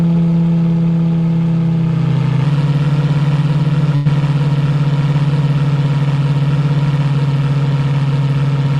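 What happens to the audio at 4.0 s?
A burst of packet loss runs from 3.95 to 4.07 s: roughly 100 ms went missing, and the receiver stretched the last sound into a fading buzz or hiss. The spectrogram shows smeared, decaying bands, then audio resumes further along.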